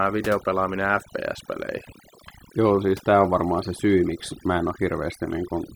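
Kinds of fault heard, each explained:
Overdone noise removal: noise reduction set far too aggressively runs across the whole speech recording, shutting down individual frequency bands whenever their level drops toward the estimated noise floor, and taking the softer parts of the voice with them. Pauses fall to near silence dotted with tinkling blips. A spectrogram shows scattered isolated bright specks on a blank background and frayed, gappy harmonics; the waveform's gaps sit almost flat.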